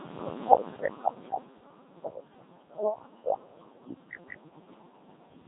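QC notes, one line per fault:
Throughout: Codec 2 vocoder. The speech comes across robotic and buzzy, with heavy damage and nothing at all above about 3.8 kHz. The decoder doesn't carry the original waveform here. It rebuilds the voice from sine waves using just pitch, voicing, energy and a rough spectral envelope, and at a rate that sounds like around 2.4 kbit/s that's pretty much all you get back.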